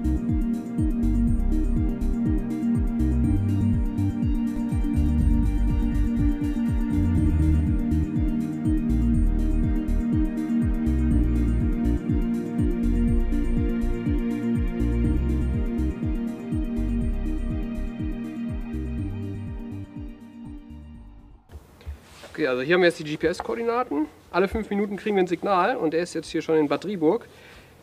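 From 4.56 to 7.60 s a doubled audio track appears: a second full-band copy trails the original by about a fifth of a second, roughly 5 dB quieter, with no decay or room colour, cutting in and out abruptly. Likely cause: a slower second capture path mixed back in.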